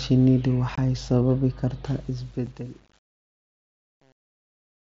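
At 0.75 s the sound drops out until 0.78 s. This is unconcealed Bluetooth headset packet loss. About 22.5 ms of audio is missing, which fits three lost 7.5 ms packets on the mSBC link. Nothing fills the gap. The hole has hard edges.

From 1.95 s to the end, the smooth fade-out suffers truncation distortion on a fade. The level steps are too coarse, which points to an 8-bit stage without dither. From 2.19 s the tail turns gritty.

At 2.46 s a second unconcealed packet loss cuts a 7.5 ms hole. That fits one lost packet. The gap is brief but abrupt. It sits within the already grainy fade.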